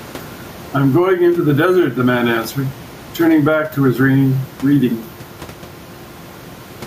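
Speech with gain pumping throughout. The gain swings by around 10 dB. The room noise is about 29 dB below the speech. The likely cause is input gain set far too high, with a fast limiter pulling it down on each peak.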